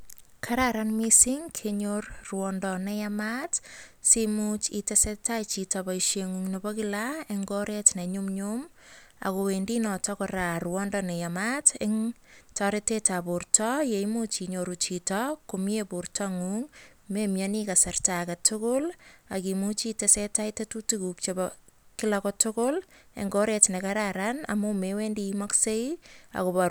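No technical faults can be heard anywhere in the speech. There is no moment in the recording that needs to be pointed out.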